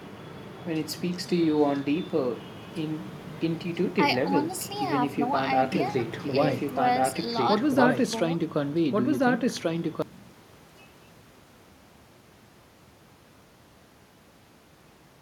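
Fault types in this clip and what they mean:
Doubled audio track: From 5.72 to 10.02 s, an equally loud copy of the speech trails about 1.5 s behind. Likely a slower second capture.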